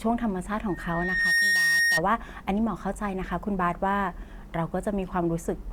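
A microphone picked up its own loudspeaker, and loop gain passed unity at 1.8 kHz, producing loudspeaker feedback squeal from 0.68 to 2.02 s. It swells over roughly 0.7 s to about 5 dB above the speech.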